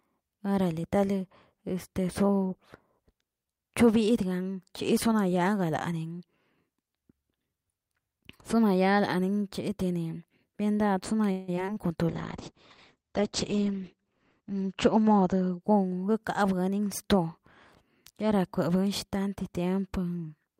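From 11.31 to 11.78 s the speech breaks up with repeated packet loss, giving a robotic sound. Four gaps fall within less than half a second, the longest about 165 ms. Each gap is bridged by stretching out the preceding sound, so nearly half of this span is synthetic continuation. Around 60 ms is simply absent, leaving audible chops where pieces of the speech drop out.

A call bitrate drop follows from 12.10 to 17.01 s. The encoder's rate falls from 64 kbps to 9 kbps, and the bottom rate holds for about 2.3 s. At that rate the codec narrows the audio bandwidth from 20 kHz to 8 kHz, removing the upper sibilance and air. Coarser quantisation makes the speech sound muffled and watery until the rate climbs back.

Inside that degraded stretch, from 14.40 to 15.56 s, a jitter buffer speed-up occurs. Excess buffered audio is trimmed by cutting short pitch-period segments many times in succession, roughly 150 ms in total. 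Playback runs at about 114% speed while the pitch stays unchanged, so the speech sounds hurried. Because this overlaps the low-bitrate section, the rushed delivery is also heard at the reduced bitrate.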